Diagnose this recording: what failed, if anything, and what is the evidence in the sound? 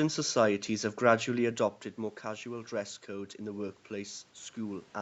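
The automatic gain rising is in the call processing stage. From about 2.24 s to the end, the voice and the room noise swell up together, slowly rather than in a jump. That shared rise is the evidence. The level at the mic dropped by about 9 dB, probably tied to the talker shifting away around 1.5 s. The AGC read that as too quiet an input and wound its gain up gradually to compensate, lifting the background along with everything else.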